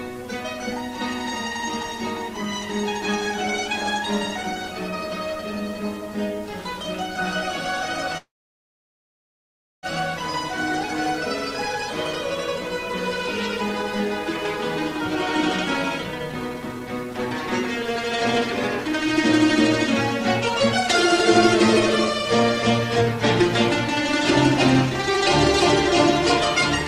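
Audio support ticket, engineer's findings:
Call audio freeze, 8.17–9.86 s: brief buzz then about 1.6 s silence; playback resumes where it stopped, nothing lost. Likely jitter buffer underrun from delayed packets. Unlike a dropout, content is delayed, not skipped.

Jitter buffer speed-up, 16.05–17.14 s (121%, roughly a fifth of a second trimmed) and 22.79–23.06 s (117%, roughly 50 ms): hurried playback, pitch unchanged. The receiver cut pitch-period slices to drain excess buffer. Unlike a resampling fault, the pitch does not rise.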